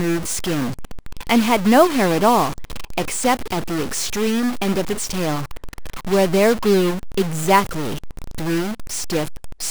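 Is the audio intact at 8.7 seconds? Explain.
No. At 8.7 seconds the speech carries a harsh, buzzy distortion, and the gaps between phrases are filled with a gritty noise floor instead of silence. This runs through the whole clip. The likely cause is a stuck bit: one bit of each sample is held at a fixed value, so roughly half the samples are pushed off by a step of about -25 dBFS. Because that bit flips with the sign of small values, quiet passages turn into noise.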